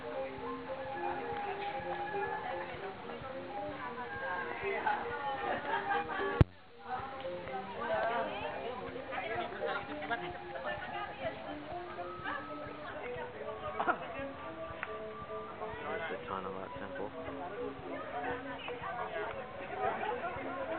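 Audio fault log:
0.00–12.89 s, wrong sample rate: the samples go out faster than they were captured, with no rate conversion in between. The ratio of about 1.09 fits material recorded at 44.1 kHz being played at 48 kHz. Speed and pitch therefore rise together, so the audio runs 1.09 times too fast and sits about 1.47 semitones sharp. It sounds slightly hurried and raised until 12.89 s, where the change in speed and pitch marks the return to the correct rate.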